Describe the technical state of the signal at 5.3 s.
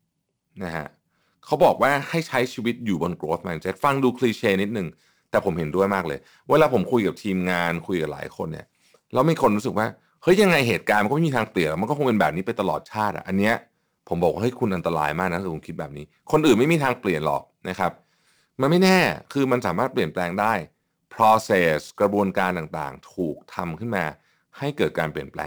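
At 5.3 s the speech carries sample clock jitter, present across the whole clip: timing wander of several microseconds shifts each sample, so steep waveform slopes pick up error roughly 25 dB below the signal, heard as a hiss riding on louder, brighter sounds and absent in pauses.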